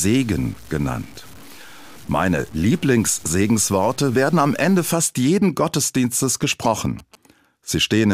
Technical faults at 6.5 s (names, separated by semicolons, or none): GSM signalling bursts